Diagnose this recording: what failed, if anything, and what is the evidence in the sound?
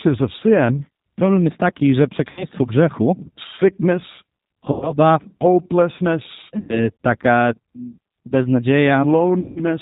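G.729 codec, throughout the clip (codec stage): the speech is band-limited with nothing above 4 kHz and has a plainly audible rough, synthetic edge. That fits an 8 kbit/s G.729A coder resynthesising each 10 ms frame from a vocal-tract filter, a pitch predictor and a few pulses.

VoIP packet loss concealed by the speech codec, at 2.31–2.45 s (right after "jest taki że"), 4.72–4.96 s, 6.59–6.89 s and 9.40–9.65 s (network stage): the gaps lose about 60, 100, 100 and 160 ms of audio. The decoder stretches its last pitch and filter into a fading buzzy tone or coloured noise, and because each frame builds on the last, the speech stays weak until the decoder recovers.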